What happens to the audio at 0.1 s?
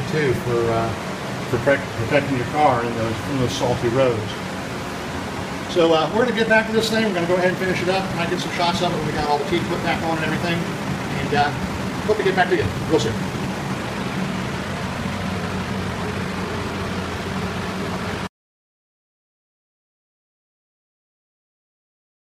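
Nothing goes wrong at 0.1 s; the audio there is intact, with no dropout, click or distortion.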